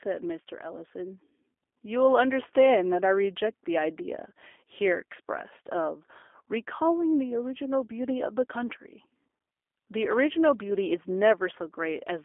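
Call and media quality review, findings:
G.729 codec, throughout. Speech band-limited to roughly 300 Hz–3.5 kHz, nothing above 3.7 kHz. Plainly audible roughness and synthetic texture from frame-based source-filter resynthesis with sparse pulse excitation, consistent with an 8 kbit/s G.729A voice path.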